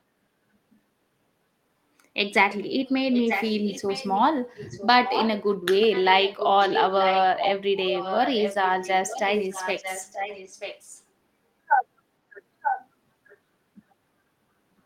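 Speech with an echo leak: a delayed copy of the talker trails the speech by about 0.94 s in stretches at 3.12–4.2, 4.55–5.43, 5.81–7.22, 7.38–7.51, 7.86–8.91, 9.08–11.03, 12.62–12.87 and 13.29–13.37 s. The copy sits about 5 to 10 dB below the speech, and about 30 dB below at the last stretch. On a spectrogram, a weaker duplicate of each syllable's harmonic pattern appears shifted right by that delay. The likely cause is a far-end echo canceller letting loudspeaker pickup through.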